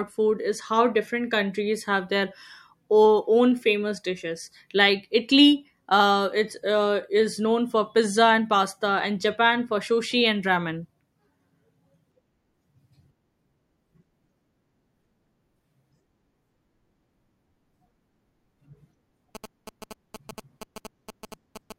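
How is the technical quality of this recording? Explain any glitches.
GSM signalling bursts run from 19.35 to 21.72 s. A nearby 2G phone signalling to its network emits short groups of radio pulses that the audio circuitry rectifies. The result is a galloping dit-dit-dit of brief 217 Hz buzzes, roughly 15 dB below the speech.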